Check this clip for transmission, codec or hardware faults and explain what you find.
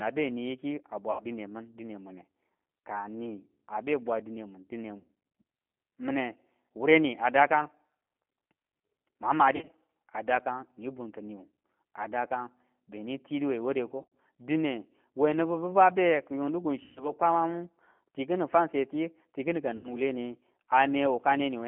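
Two faults are present: the whole recording has passed through a low-rate G.729 speech codec, and six short packet-loss gaps have been filled in by that codec's concealment.

The G.729 codec damage runs through the entire clip. The speech is confined to a telephone band of roughly 200 Hz to 3.4 kHz, with nothing above. Within that band it is plainly rough and slightly synthetic, because the decoder rebuilds each short frame from a vocal-tract filter, a pitch predictor and a few coded pulses rather than from the waveform itself. The result fits an 8 kbit/s G.729A coder. Plain band-limiting would sound muffled but clean; this buzzy, resynthesised texture is what marks a model-based codec.

VoIP packet loss concealed by the speech codec occurs at 1.1–1.24 s, 4.98–5.1 s, 9.56–9.7 s (just before "a dakan ni bunki"), 14.02–14.1 s (just after "dakan benin tidu we"), 16.83–17.12 s (just before "kwamamu tikini fansetiyu tikini") and 19.77–19.97 s. 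The missing audio amounts to 80, 100, 90, 80, 130 and 70 ms respectively. At 9.56 s and 14.02 s the losses are scattered over about 120 ms and 100 ms, with a longest run of 50 ms.

During each gap, the decoder keeps extrapolating from its last pitch and filter and lowers the gain step by step. The sound stretches into a fading buzzy tone or coloured noise rather than dropping to silence. Because each frame builds on the previous one, the sound stays weak or smeared for a moment after packets resume. That lingering, tonal fill is what separates codec concealment from hard dropouts, which cut to silence, and from simple packet repetition, which produces a stuttered copy of the preceding sound.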